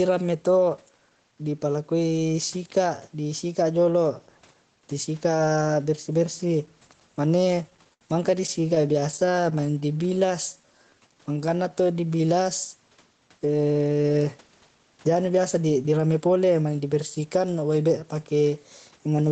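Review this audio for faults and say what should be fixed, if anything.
Gain pumping runs through the whole speech clip. The level swings by about 5 dB, pulling loud and soft parts closer together so the sound is squashed. The likely cause is input gain set far too high with a fast limiter or compressor clamping every peak. On a waveform the envelope looks flattened. A spectrogram shows the level rising and falling with each louder syllable. Lowering the microphone gain so the limiter rarely engages would prevent it.

Repeated stalls (stutter) appear in two bursts. From 7.35 to 8.03 s there are eight breaks totalling 143 ms, the longest 74 ms, and about a fifth of that span is concealed. From 8.47 to 10.21 s there are 24 short breaks of 14 ms or less, adding 231 ms. No audio is lost. Each time the jitter buffer ran dry, the receiver stretched the last sound until packets resumed. On a spectrogram these show as smeared, repeated frames and frozen harmonics. 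A waveform shows copied cycles and faded dips. Fixing the network delay variation, or allowing a deeper buffer, would prevent it.

Jitter buffer slow-down follows from 9.97 to 12.34 s. The speech plays at about 87% speed with unchanged pitch, and 322 ms is added. The receiver rebuilt its reserve by repeating single pitch periods and padding pauses, so syllables drag and vowels sound drawn out. A spectrogram shows harmonics holding their spacing while vowels stretch horizontally. The waveform shows near-identical cycles repeated back to back. A steadier network path, so the buffer never runs low, would prevent it.

Jitter buffer speed-up occurs from 14.03 to 17.43 s. Playback runs at about 111% speed with pitch unchanged, and roughly 0.4 s is cut out. Too much audio had built up in the buffer, so the receiver trimmed short pitch-period pieces again and again, which makes the speech sound hurried. 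A spectrogram shows compressed syllables and shortened gaps at normal harmonic spacing. The waveform shows cycles spliced out at zero crossings. Smoothing packet delivery so late packets don't arrive in clumps would prevent it.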